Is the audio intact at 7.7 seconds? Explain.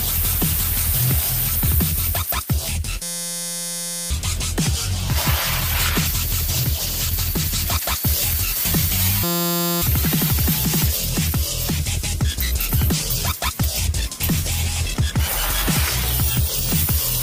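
No, at 7.7 seconds two problems overlap. First, a thin, steady whistle at 4.5 kHz runs from 5.43 to 10.07 s, sitting well below the main sound and swelling and fading slowly in level. That's likely a feedback whistle: the speaker-to-mic loop is hovering right at the edge of feedback, so that one frequency keeps ringing without building into a full howl.

On top of that, there's a call bitrate drop from 6.02 to 8.11 s. The sound gets coarse and watery, and the top end dulls, which fits the encoder being pushed from about 32 kbps down to 12 kbps after the call's bandwidth estimate fell. It stays at that low rate for about 2 s, which covers 7.7 s, and clears up when the bitrate comes back.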